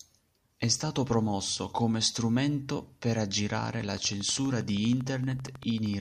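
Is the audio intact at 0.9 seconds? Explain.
Yes, at 0.9 seconds the speech is intact, with no dropout, click, distortion or other fault audible at that moment.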